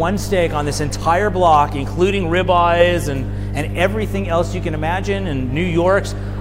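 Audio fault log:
Throughout: mains hum. A ground loop or nearby transformer is leaking the 50 Hz power line into the signal path, laying a steady low drone with some low harmonics under the audio, loud enough to sit only a few decibels beneath it.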